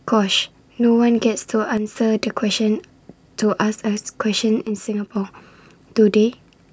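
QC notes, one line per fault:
1.77–1.95 s and 4.67–5.16 s, one channel drops out: the level abruptly sinks by about 6 dB and then jumps back, first as a short dip and then a longer half-second one. That's likely one stereo side going silent, so the mono sum loses its share.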